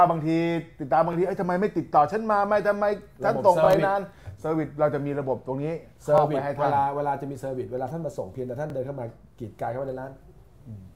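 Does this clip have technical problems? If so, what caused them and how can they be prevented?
Yes. There are overlapping chunks. A stutter is heard at 1.13–1.16, 3.66–3.68, 6.18–6.20 and 8.70–8.72 s. The audio was handled in 2.5 s chunks. Each began 23 ms early, so that slice plays twice. Align chunk boundaries exactly to prevent it.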